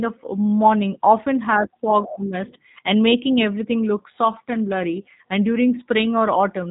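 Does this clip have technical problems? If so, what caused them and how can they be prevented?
Yes. Throughout the clip, the speech was squeezed through the G.729 codec, consistent with its 8 kbit/s mode. Each 10 ms frame is rebuilt from a vocal tract model and a few pulses, so nothing above 3.8 kHz remains and the speech sounds plainly rough and synthetic. Using a wideband codec at a higher bitrate would prevent this.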